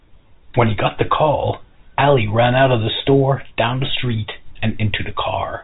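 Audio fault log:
The speech shows the narrow band of G.711 telephone coding, with nothing above 3.8 kHz and at most a faint, level-following quantisation noise that fits a 64 kbps mu-law line, and no faults are present.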